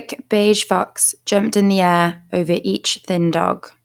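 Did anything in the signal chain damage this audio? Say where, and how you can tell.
No, nothing in this speech recording stood out as damaged on listening.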